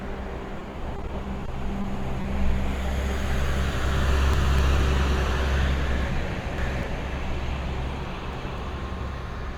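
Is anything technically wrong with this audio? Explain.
Yes. The clip has three kinds of network and playback fault.

From 0.59 to 1.86 s the sound turns choppy. This is repeated packet loss with a robotic sound. Ten separate gaps fall in that stretch, none longer than about 20 ms. Each hole was patched by extending the sound just before it, so about 11% of the span is stitched-in imitation rather than real audio. The rapid run of small repairs gives the mechanical, stuttering texture.

At 2.22 to 2.26 s there is a brief smear, a short wobble lasting about 40 ms. This is short concealed packet loss. Roughly 20 ms of audio never arrived in time. The receiver bridged the gap by continuing the preceding sound and then crossfading back into the real signal.

Three moments sound jumbled: 4.09 to 4.59 s, 6.08 to 6.83 s, and 8.08 to 8.58 s. These are chunks out of order. In each case a 250 ms block of audio played late, after material that should have followed it. 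At 4.09 s and 8.08 s it is one block late, and at 6.08 s it is two blocks late, which makes that middle jumble the longest. Nothing is missing, but the sequence is scrambled. There are hard joins where the blocks were spliced in the wrong order.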